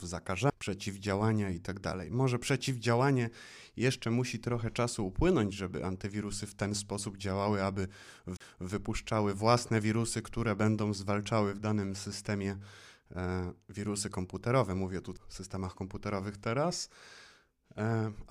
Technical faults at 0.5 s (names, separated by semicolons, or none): CD skip